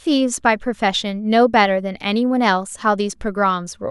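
Nothing stood out as a technical fault on listening to this speech recording.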